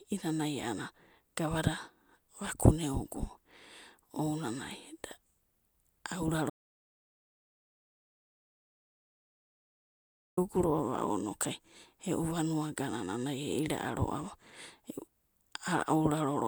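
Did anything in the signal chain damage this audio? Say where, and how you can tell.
Yes: an audio dropout to silence, 6.50–10.37 s, likely a lost input link. The waveform flatlines to silence, and the spectrogram shows a fully blank band with no room tone.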